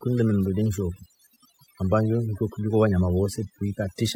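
Overdone noise removal runs through the whole speech clip. The noise reducer is set so aggressively that any frequency band close to its noise estimate is pushed down or gated off, taking softer speech detail along. Pauses collapse into near silence sprinkled with twinkling specks.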